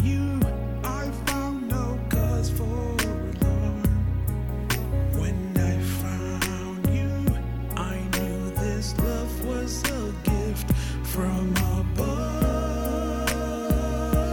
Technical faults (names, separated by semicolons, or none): low bit depth with dither